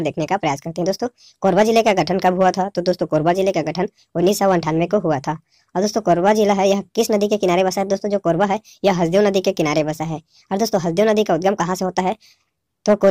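At 2.01 s the sound suddenly sags: everything slows by 5.75% and drops 103 cents, so roughly a semitone flat, with speed and pitch moving together. It holds there until 3.34 s, then snaps straight back to the right rate. That's a drift correction step, likely clock-matching software lurching the playback rate in one go to rebalance its buffer rather than easing it gradually, which is why you get that abrupt detune-and-return.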